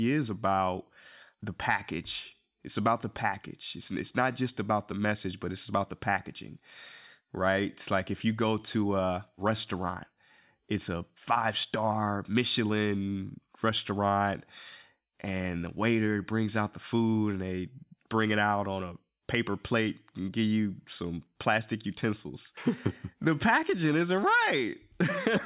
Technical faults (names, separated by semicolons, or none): none